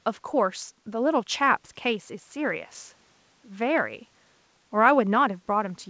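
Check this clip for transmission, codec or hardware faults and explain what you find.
No transmission, codec or hardware faults appear here.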